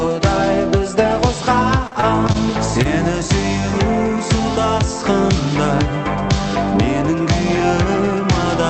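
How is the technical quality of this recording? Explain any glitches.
The recording passes through a call codec whose top end stops near 8 kHz, which points to Opus at a moderate bitrate. There are two packet-loss glitches close together.

From 1.87 to 2.37 s there is repeated packet loss, and the sound turns robotic. Five separate gaps fall inside half a second, the longest about 37 ms. Each is papered over by extending the preceding sound, and about a quarter of that stretch is synthetic fill. The result is a choppy stutter. That clustering of holes is what separates it from a single dropout.

From 2.83 to 2.87 s comes one short concealed packet loss. Roughly 20 ms never arrived, and the receiver bridged it by continuing the last waveform before crossfading back into real audio. It is heard as a single brief smear or wobble, with no repetition. Unlike the earlier burst, it is isolated and too short to produce the robotic texture.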